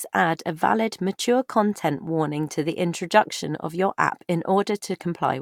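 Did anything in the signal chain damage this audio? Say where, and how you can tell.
No, nothing in the signal chain damaged this audio.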